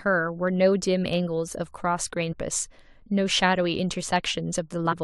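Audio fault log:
2.31–2.33 s and 4.91–4.93 s, damaged data in a compressed stream: two brief blips, each about 22 ms, cut into the speech. Corrupted bytes there make the decoder misread the frames and lose sync until it finds the next valid frame header.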